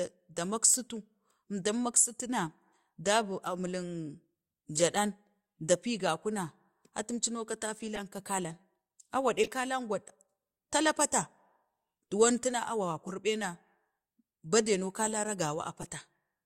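Speech with six short blips from corrupt frame decoded: 3.30–3.32, 4.75–4.82, 7.95–8.00, 9.43–9.48 (just before "kaleng gwa"), 13.07–13.12 and 15.81–15.84 s. Damaged frames were decoded anyway, spraying misplaced energy across two or three frames.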